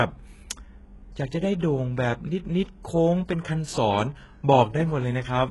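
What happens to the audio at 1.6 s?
A short pre-echo runs from 1.59 to 1.62 s, about 34 ms. A sharp speech attack falls late in a codec block. Quantisation noise spread across that whole block leaks into the quiet moment before it. A short hiss precedes the onset, and the attack sounds smeared.

Around this moment the treble is also dull and coarse. Nothing is present above 11.5 kHz. The upper band sounds rebuilt rather than real, so s sounds turn gritty and lispy. The likely cause is heavy HE-AAC compression, which fits a very low bitrate near 12 kbps.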